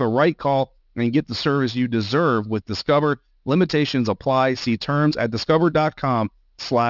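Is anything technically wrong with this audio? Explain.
Yes, there's aliasing throughout. Unfiltered content above 6 kHz folds back down, which fits a 12 kHz resample, so sibilants sound gritty and metallic, roughly 20 dB under the speech.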